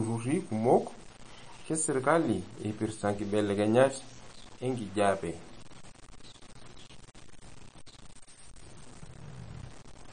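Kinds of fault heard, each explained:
Low bit depth without dither: Throughout the speech there is a gritty, rasping distortion that rises and falls with the signal, sitting only about 20 dB below it. This is likely from samples being truncated to very few levels with no dither, which fits a 7-bit signal. The rounding error tracks the sound, so quiet tails break up. On a waveform the low-level parts show visible stair-steps, and a spectrogram shows a signal-dependent haze across the band.
MP3 compression: The speech has a watery, swirling quality, with consonant onsets smeared and sibilants turning metallic. This is likely MP3 encoding at a low rate, pointing to around 36 kbps. At that rate the encoder cannot afford detail, so weak frequency components drop in and out from frame to frame. A spectrogram shows a hard ceiling with nothing above 9.4 kHz, and patchy, flickering holes in the upper bands.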